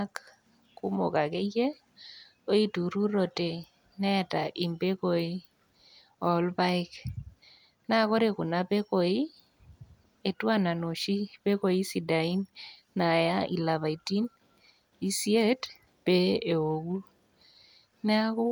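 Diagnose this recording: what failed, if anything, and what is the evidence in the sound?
Nothing in the recording points to a failure at any stage of the chain, and the speech signal holds steady and continuous for its whole duration.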